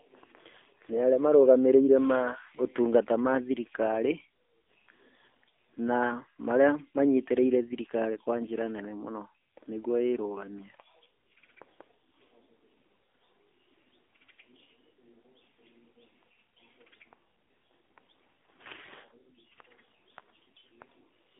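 Speech passed through the AMR narrowband mobile codec at a low rate, which fits about 7.4 kbps, confining it to a 300 Hz to 3.6 kHz band with plainly audible buzzy, synthetic coding damage throughout.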